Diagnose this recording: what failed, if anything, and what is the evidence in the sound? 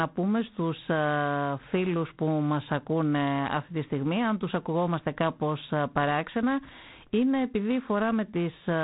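The codec stage failed: G.726 ADPCM coding runs throughout. A harsh, rasping hiss rises and falls with the speech level, which fits 24 kbit/s, where three bits per sample carry the prediction error. A spectrogram shows a hard ceiling at 3.9 kHz.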